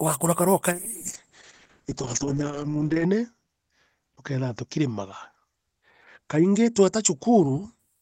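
From 0.74 s to 7.85 s the speech turns rough and watery, and the top end falls away so it sounds muffled, with the worst stretch lasting about 2.3 s before clarity returns. This is a call bitrate drop: the bandwidth estimate fell, so the encoder had far fewer bits to spend and coded everything more coarsely. The degradation fits a fall from around 32 kbps to about 7 kbps, with the audio band narrowing from 20 kHz to 8 kHz.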